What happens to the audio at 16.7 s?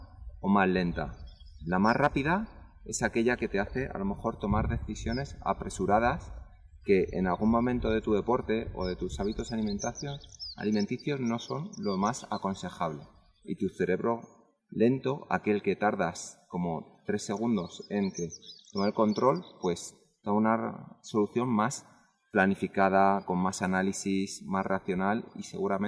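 Nothing goes wrong at 16.7 s; the audio plays through that moment intact, with no dropout, click or distortion.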